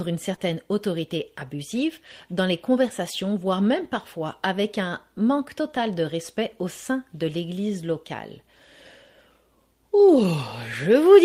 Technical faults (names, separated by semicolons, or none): short concealed packet loss